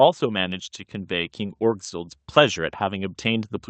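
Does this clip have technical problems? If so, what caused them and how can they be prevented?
Yes. There is automatic gain rising from 0.19 s to the end. The gain control judged the input too quiet. It kept turning it up. Speech and background noise swell together. Prevent it by setting a proper input level and fixing or disabling the automatic gain.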